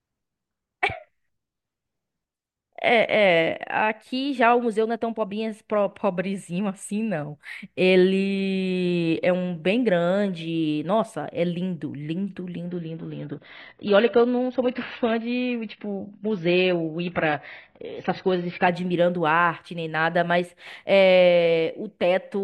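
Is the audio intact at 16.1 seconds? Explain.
No. At 16.1 seconds the speech is inside a stretch of adaptive stream at a lower bitrate, running from 12.68 to 18.68 seconds. The stream switched abruptly to a much leaner encoding, with no gap, and everything above 6 kHz is gone, so sibilants dull and the treble sounds muffled. The loss points to a drop from around 96 kbit/s to around 16 kbit/s AAC, with full quality returning at 18.68 seconds.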